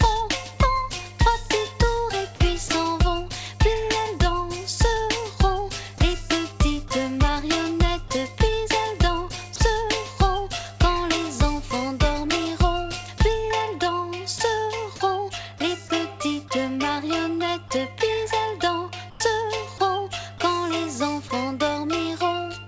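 There's a steady 50 Hz mains hum under the whole clip, sitting roughly 20 dB below the signal. That's the classic sign of a ground loop or a transformer nearby bleeding the power line into the audio, so you hear a constant low drone the entire time. On top of that, the sound briefly drops out at 2.68–2.70, 6.88–6.90, 8.08–8.10, 9.56–9.60, 14.38–14.40, 19.10–19.20 and 19.78–19.80 s. Those short gaps of 20 to 100 ms get filled with soft steady noise, likely sound dropped by the voice detector, which mistook those moments for background and swapped in comfort noise. The band also stops at 8 kHz, which fits a G.722 call path at 64 kbps.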